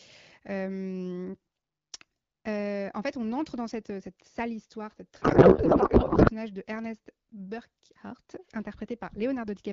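At 5.22 s, just after "cette sale histoire cette", the two ends of the link stop agreeing on how the AMR wideband payload is packed. Frames sent in octet-aligned form are unpacked as bandwidth-efficient, so every field lands in the wrong bits. This codec payload misread turns the speech into garbled noise and warble that barely tracks it, lasting until 6.32 s. Either side of it, the HD Voice path sounds clear, consistent with a rate around 12.65 kbit/s.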